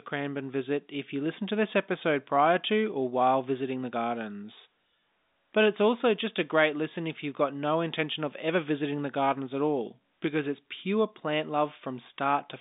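No technical faults can be heard in this speech.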